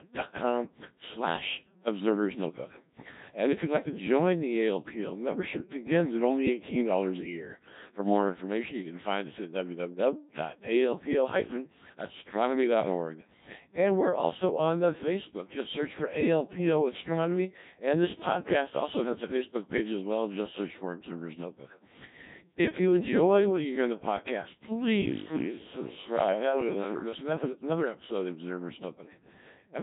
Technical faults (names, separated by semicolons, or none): Codec 2 vocoder; switch to a distant microphone